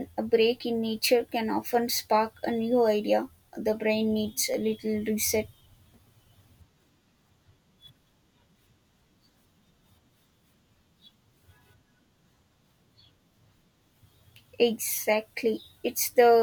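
The speech clip likely lost a fraction of a millisecond of samples at 1.75 s, between "in nature can" and "spark a new", and at 4.54 s, after "brain needs". These dropped samples make the waveform jump, giving a sharp click each time.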